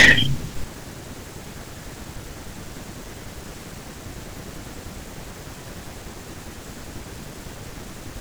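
Right at the top of the speech, from about 0.00 to 0.13 s, there's hard clipping. The signal is being pushed roughly 7 dB past what the stage can handle, so the peaks get sliced off flat instead of rounding over. Those squared-off tops throw extra harmonics way up the spectrum, and you hear it as a short crackle on the peaks of the opening sound.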